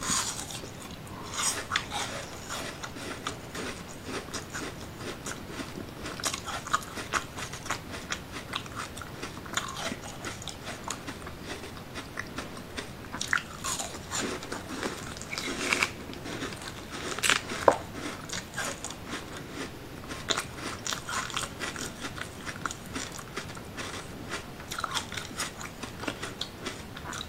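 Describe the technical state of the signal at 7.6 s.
At 7.6 s there is a brief stutter, a small hitch where about 100 ms of sound plays a second time, running from 7.53 to 7.63 s. This is an overlapping chunks fault. The audio was handled in blocks, which fits chunks of about 4 s, and the next block began before the previous one had finished. At that join the last tenth of a second of material was replayed, producing the audible repeat.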